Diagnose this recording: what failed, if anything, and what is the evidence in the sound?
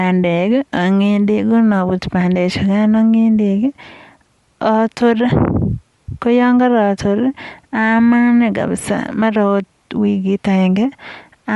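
Throughout, the speech sounds breathy and grainy, with nothing above 11.5 kHz. This is likely Bluetooth LC3 compression at the codec stage, fitting 48 kbps with 10 ms frames.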